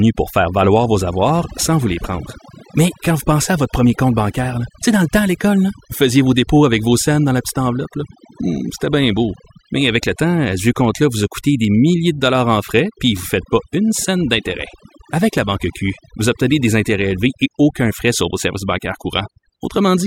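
It's a speech recording with overdone noise removal running the whole way through. The reduction was set so hard that bands near the noise estimate get pulled down or gated out, taking quiet parts of the voice too. You get near-silent gaps with twinkly specks.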